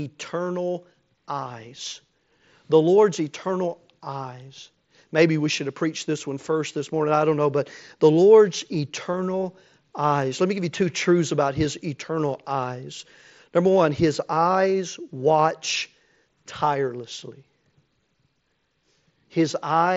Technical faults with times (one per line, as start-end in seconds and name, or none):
1.89-1.95 concealed Bluetooth headset packet loss
5.56 concealed Bluetooth headset packet loss
9.12 concealed Bluetooth headset packet loss